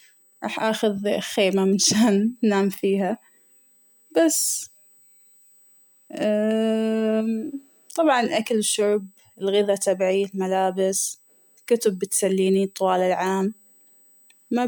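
Speech, with USB whine running from start to finish: a fixed-pitch tone at 8 kHz, strongest at its 16 kHz harmonic and roughly 35 dB below the speech. The 8 kHz rate matches the 125-microsecond microframes of a USB bus, whose current draw is leaking into the audio through a shared power or ground path.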